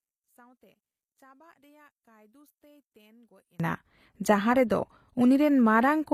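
From the start to 3.60 s the speech sits about 34 dB below its level in the rest of the clip, leaving only a weak residue of the sound. This is most likely one channel inverted: with one side's polarity reversed, the material shared by both channels cancels when they are folded to mono, and only the difference between them survives. On the waveform the envelope stays collapsed near the baseline until 3.60 s, then jumps up to full level. A spectrogram shows that opening stretch nearly empty across all frequencies.

Throughout the clip there is plainly audible damage from HE-AAC compression, here at a low rate that fits around 24 kbps. Only the lower spectrum is coded directly. The treble is rebuilt by copying lower bands upward under a coarse envelope, so its harmonics do not line up with those beneath the crossover, and s sounds come out gritty, metallic or lispy. On a spectrogram nothing appears above 15.5 kHz, and the upper band shows blocky, repeated patterns rather than fine detail.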